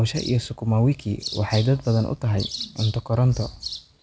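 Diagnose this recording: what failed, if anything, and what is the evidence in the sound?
Nothing failed here; the call path is working normally.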